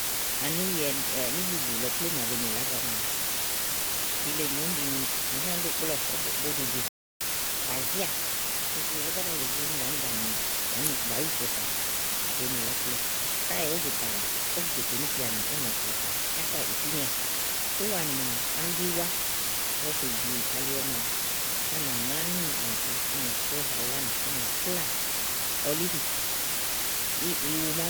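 Low bit depth with dither runs through the whole speech clip as a constant, even hiss that sits close to the speech itself, only about 10 dB below it. The noise level points to something like 4-bit quantisation. Because random dither was added before each sample was rounded to so few levels, the rounding error is spread into steady broadband noise instead of grainy distortion. The hiss stays uniform whether the speech is loud or quiet.

A playback stall begins at 6.88 s. The audio cuts out mid-flow and stays silent for about 0.33 s, until 7.21 s, then resumes from where it left off. The likely cause is the player running short of buffered data, or its audio thread being held up, so nothing reached the output until it recovered and the backlog could be played.

Catch-up at higher speed follows the stall directly, from 7.21 s to 9.39 s. To regain the third of a second it lost, the player resamples its backlog and runs at 1.15 times normal speed. 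Because resampling shifts speed and pitch together, the speech sounds hurried and raised by roughly two semitones over those two seconds. At 9.39 s it drops back to its normal rate and pitch.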